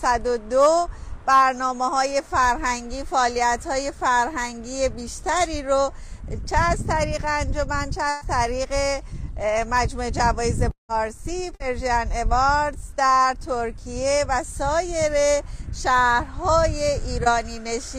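At 8.09 to 8.23 s a burst of packet loss removes about 120 ms; the receiver stretches the last sound into a fading buzz or hiss. On a spectrogram this shows as smeared, repeated bands that thin out, then an abrupt jump to later material.

From 10.71 to 10.91 s the sound is continued for roughly 180 ms, first for about 60 ms as a decaying buzz or hiss, then as 120 ms of near silence, flat on the waveform, before resuming further along. This is likely a long network dropout.

At 11.55 to 11.62 s a second, shorter burst of packet loss hides about 60 ms behind a brief fading buzz or hiss, visible as a short, frozen spectral slice.

At 17.24 s short concealed packet loss patches a 20 ms hole. It is heard as a quick smear or wobble and appears on the spectrogram as a narrow blurred seam in otherwise continuous texture.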